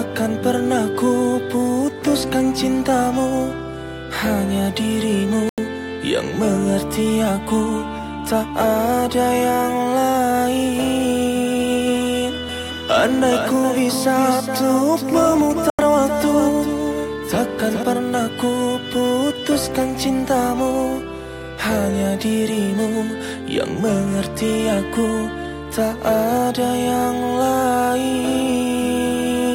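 At 5.49 s the sound cuts to silence for about 87 ms, then returns at 5.58 s further along, as though it had kept playing through the gap. This is a Bluetooth dropout, likely caused by audio packets failing to reach the headphones in time and being discarded. The length of the hole fits a run of about six lost packets.

From 12.49 s to 17.83 s a second, full-band copy of the sound trails the original by around 400 ms, roughly 5 dB quieter. It has no reverberant tail or room colouring, and it switches in and out sharply at both ends. This is a doubled audio track, likely the same signal captured again through a slower path and mixed back in out of step.

At 15.70 s, inside that doubled stretch, a second Bluetooth dropout punches another gap of about 87 ms, ending at 15.79 s. The sound again picks up where it would have been had playback continued, and this gap also fits roughly six lost packets.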